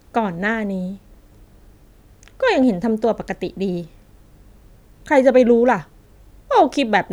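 A speech recording, with nothing technically wrong to report.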